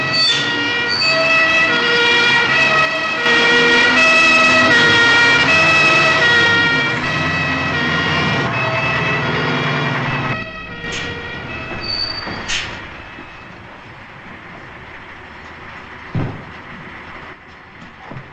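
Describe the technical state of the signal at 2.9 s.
At 2.9 s the signal is inside a one channel drops out event, 2.85 to 3.26 s. The level falls abruptly by about 6 dB, likely from one stereo side vanishing before the mono sum. The waveform envelope halves with sharp edges, and a spectrogram dims evenly across all frequencies.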